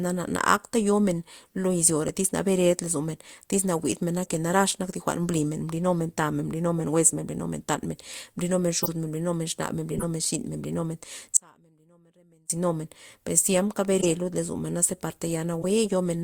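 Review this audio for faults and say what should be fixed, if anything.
Damaged compressed frames were decoded instead of concealed (corrupt frame decoded), throwing energy to wrong frequencies as short chirps and noise bursts peaking around -15 to -25 dBFS: 2.08, 4.21–4.29, 6.78–6.83, 8.83–8.89, 9.91–10.04, 13.99–14.06 and 15.62–15.66 s. Validate each frame with a checksum and conceal any that fail, rather than passing corrupted data to the decoder.

The signal feed was likely lost while the downstream path stayed live (audio dropout to a faint residue), so the speech drops abruptly from 11.37 to 12.50 s, leaving only a faint trace about 30 dB down. Monitor the input connection and source link, and buffer or fail over so a break does not reach the output.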